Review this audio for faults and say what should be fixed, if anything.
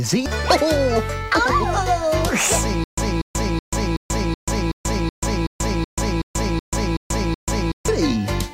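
The playback likely stalled and replayed its last fragment on each retry, a stutter with silent gaps from 2.84 to 7.88 s: a 238 ms burst repeating every 375 ms with digital silence between. Deeper buffering, or resuming from the correct position after an underrun instead of looping the stale fragment, would prevent this.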